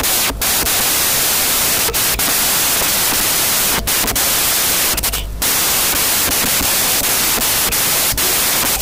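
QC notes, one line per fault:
throughout, wrong sample width: the speech sits beneath loud, harsh noise and runs 1.5 times too fast, pitched up to match. Audio written as 16-bit samples is being read as packed 24-bit, so each value straddles parts of neighbouring samples and only some keep the true top bits. Fewer samples come out, hence the speed-up. A plain sample-rate error would be clean, and a byte-order swap would keep the right speed.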